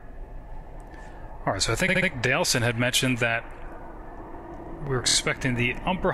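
At 1.88 s and again at 5.07 s, repeated frames produce a stutter: a short run of compressed audio is decoded three extra times, lengthening the sound by 209 ms and 78 ms.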